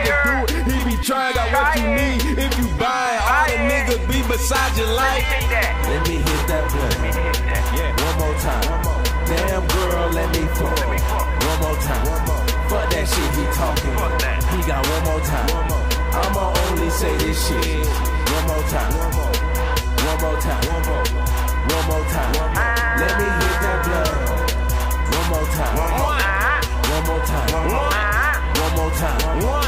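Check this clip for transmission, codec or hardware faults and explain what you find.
No faults found; nothing to report.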